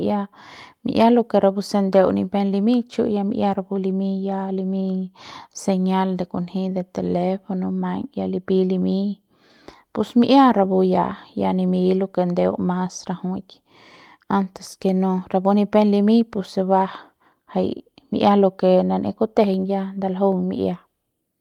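A speech recording with no technical fault to be heard. Nothing in the signal stands out as a problem at any point.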